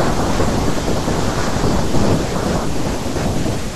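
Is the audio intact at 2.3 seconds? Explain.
No, at 2.32 s the speech jumps ahead about 70 ms, likely a dropped buffer (overrun) that was overwritten before being read.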